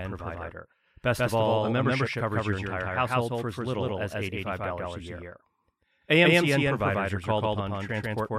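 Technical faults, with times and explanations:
Throughout, doubled audio track. Every sound is followed by a second, full-band copy arriving about 150 ms later, at roughly the same loudness. The gap is too long to blend, so each onset is heard twice, like a slap. The trailing copy carries no decay or room colour. It is an exact duplicate. The likely cause is the same signal being captured again through a slower path and mixed back in.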